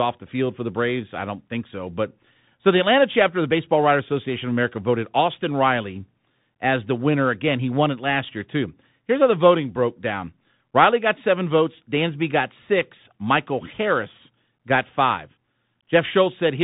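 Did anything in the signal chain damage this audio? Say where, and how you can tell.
Yes, at the codec: Bluetooth CVSD headset coding throughout, with nothing above 3.8 kHz, scratchy s sounds and granular hiss from one-bit adaptive-step delta modulation, which fits 64 kbps.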